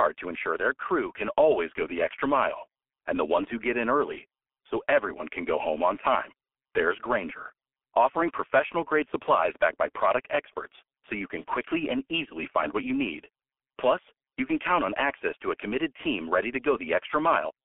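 Throughout, G.723.1 codec damage is heavy. The 300 Hz to 3.4 kHz band and the hoarse, smeared consonants point to a roughly 6.3 kbit/s stream, harsher than plain narrowband filtering.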